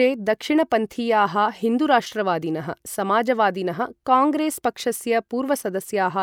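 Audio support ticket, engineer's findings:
Listened to the full speech clip and nothing stood out; no findings to log.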